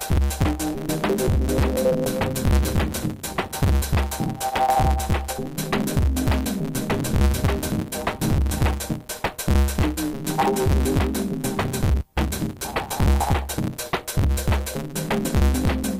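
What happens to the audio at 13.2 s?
At 13.2 s the block size mismatch (truncated) is present, as it is for the whole clip. The end of each block, which fits 512-sample writes, is dropped, giving a 138 Hz buzz and audio running 1.6 times fast. Unlike a plain speed-up, it adds this block-rate buzz.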